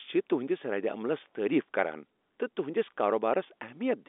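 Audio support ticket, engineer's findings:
No faults found on this call.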